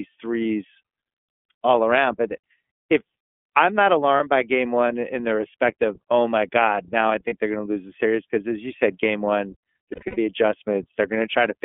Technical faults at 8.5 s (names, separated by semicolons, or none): iLBC codec